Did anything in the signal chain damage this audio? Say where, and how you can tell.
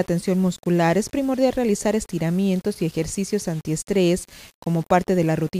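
Yes. A grainy distortion runs through the whole clip, and it follows the sound, getting grittier in quiet passages. That points to low bit depth without dither, likely from a sample-format conversion that rounded everything to about 7 bits, leaving error roughly 30 dB below the signal.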